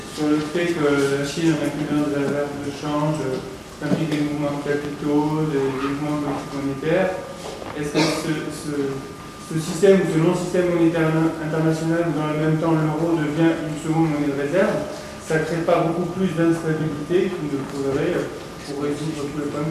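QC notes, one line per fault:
Nothing here catches the ear; it's all fine to listen to.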